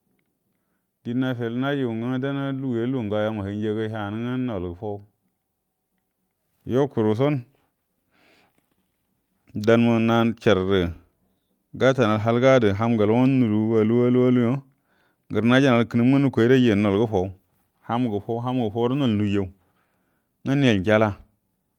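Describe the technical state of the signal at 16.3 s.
At 16.3 s the speech signal is intact, with no technical fault present at that moment.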